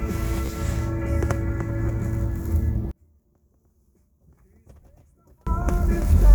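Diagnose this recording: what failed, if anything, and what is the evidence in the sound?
Bluetooth stutter on the wireless link, around 0.46 to 0.50 s: a short buzzy repeat where the receiver kept replaying its last buffer. About 30 ms of audio went missing, which fits a couple of dropped packets, and the sound picks up further along.

From 2.91 to 5.47 s the sound collapses by about 37 dB, leaving only a faint residue. That's likely one channel inverted, probably a polarity swap in the wiring, so the shared content cancels when summed to mono.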